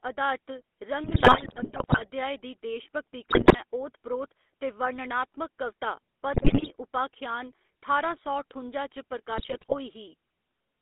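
The whole clip carries GSM full-rate codec damage. It sounds buzzy and gravelly, and the line is narrowed to about 250 Hz to 3.6 kHz.

GSM bit errors strike at 1.04 to 2.07 s, 3.30 to 3.59 s, 6.34 to 6.70 s and 9.38 to 9.75 s. Corrupted decoder values distort frames into squawks, pops and gargling.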